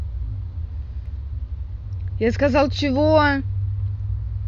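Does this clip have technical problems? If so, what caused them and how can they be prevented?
Yes. Between 0.86 and 1.46 s the speech carries four CD scratch ticks, each a fraction of a millisecond long. A scratch or blemish on the disc wipes out more data than the error correction can rebuild, so the player conceals those samples on each pass of the damaged spot. Their regular spacing, tied to disc rotation, distinguishes them from randomly timed buffer clicks. Prevent this by ripping from a clean, undamaged disc with a secure, re-reading ripper.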